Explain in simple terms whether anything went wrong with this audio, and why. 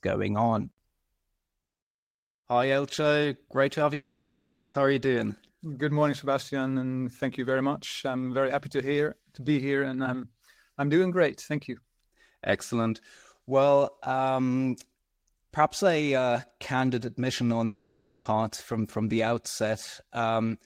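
Two gaps in the speech, at 3.94 to 4.75 s and 17.65 to 18.26 s, point to a likely long network dropout. In the first, about 0.8 s of speech is missing: the last sound is stretched into a fading buzz, and for roughly the final 0.2 s there is only silence. In the second, 0.6 s is missing and the buzz fills the whole gap. The speech then resumes further along, with the missing parts never recovered.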